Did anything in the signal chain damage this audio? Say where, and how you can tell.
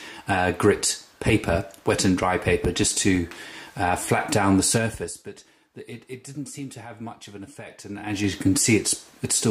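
Yes. A filter restarted on every block, from 0.93 to 3.21 s, puts a transient at each block start, giving a 21.5 Hz buzz that fits a 2048-sample buffer.

Zipper noise at 4.74 to 5.25 s and 7.85 to 8.36 s: unsmoothed 3 dB gain steps, about ten a second, tick through a fade of roughly 20 dB down, then up.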